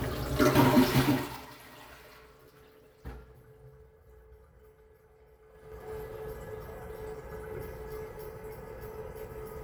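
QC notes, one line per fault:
5.46–5.89 s zipper noise: level shifts about 20 dB in unsmoothed 4 dB steps, roughly ten per second; staircase waveform envelope, faint vertical click lines in the spectrogram.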